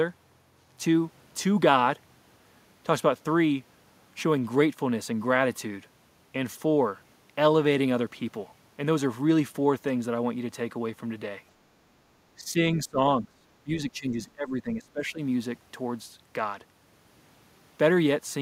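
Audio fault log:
12.38–12.98 s, 13.21–13.27 s, 13.64–14.17 s and 14.35–15.2 s: speech suppressed in double talk. The speech dips and thins in bursts, falling by roughly 15, 5, 10 and 20 dB, most deeply near 15 s. This is likely an echo canceller turning the talker down while both sides spoke at once.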